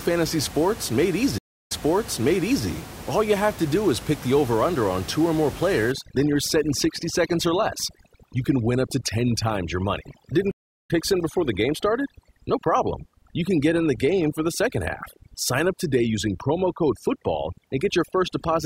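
At 1.38 s, just after "fantasy sports made", a stream reconnect breaks the audio. The player falls silent for about 0.32 s, then restarts a fresh decoder, and the sound comes back roughly 0.96 s earlier than where it stopped, so a stretch is heard twice. A plain dropout would pick up where it left off. Here the jump back, and the muted or fading first moment of the restarted decoder, mark it as a reconnect. The disturbance lasts until 2.67 s.

From 5.92 s, after "on two or more", to the end, overdone noise removal takes hold. The room noise, which sits about 15 dB below the speech, drops and breaks up into twinkling specks in the pauses, and quiet parts of the voice are cut along with the noise. A low-bitrate codec would smear the whole band. These artefacts instead come and go with individual bands crossing the noise estimate.

A second stream reconnect falls at 10.51 s, inside that processed stretch. 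This time the silence is about 0.38 s, and the audio resumes roughly a third of a second later in the stream, so a short piece is skipped rather than repeated, and it settles by 10.9 s.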